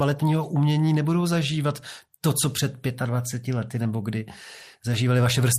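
A short bit of speech, and nothing technically wrong turns up anywhere in it.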